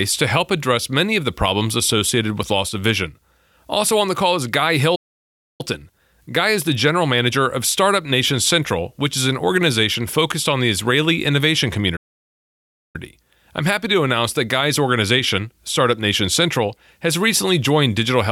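The player likely ran dry of buffered data or had its output thread held up. The result is two playback stalls, where the speech cuts to silence in mid-flow before carrying on. The first runs from 4.95 to 5.61 s, a gap of about 0.64 s. The second, from 11.96 to 12.96 s, lasts nearly a full second at 0.98 s. Both sound like an abrupt dead stop in the speech.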